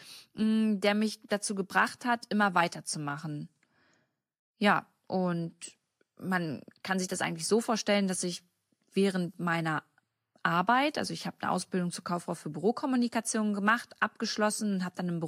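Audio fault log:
Throughout: sample clock jitter. The converter clock wanders by roughly a microsecond, so each sample is taken slightly off time, and the error grows with the waveform's slope. The result is a fine hiss about 40 dB below the speech, strongest on loud, bright sounds and gone in pauses.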